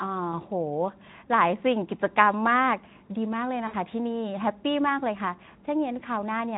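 A speech clip, carried through a lightly compressed Speex path, shows VoIP packet loss concealed by the speech codec at 0.32–0.40 s, 3.68–3.75 s and 5.45–5.50 s. The middle one fits about 60 ms of lost audio, the others a single 20 ms frame. Unlike a plain dropout, the gaps aren't silent. The decoder stretches the preceding sound into a fading buzzy tone or coloured noise, and the voice stays weak or distorted briefly after recovery.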